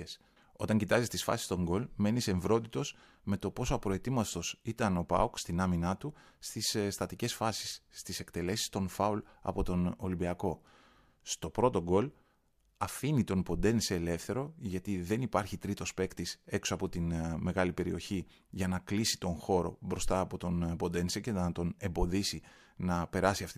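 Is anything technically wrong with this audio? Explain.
No, nothing technically wrong can be heard in this speech recording. There is no technical fault here to explain.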